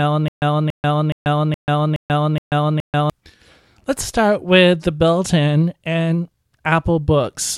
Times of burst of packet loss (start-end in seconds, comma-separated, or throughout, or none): none